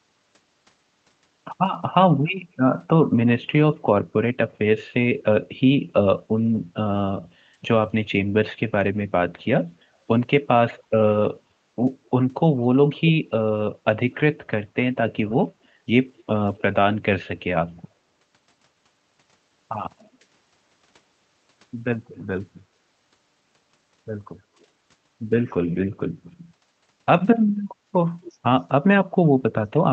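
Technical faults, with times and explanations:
10.77–10.83 s, 19.99–20.10 s, 27.57–27.62 s and 28.23–28.32 s, echo leak: you get brief, faint ghost copies of the speech trailing it by roughly a quarter second (256 to 269 ms). Most are very quiet, around 30 to 40 dB down, but the one at 28.23 s is closer to 20 dB down and easier to catch. It's likely a far-end speakerphone whose echo canceller let short bits slip back, riding the 8 kHz-band Opus call path.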